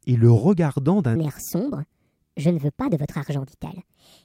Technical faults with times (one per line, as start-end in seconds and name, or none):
1.16-4.25 section at the wrong speed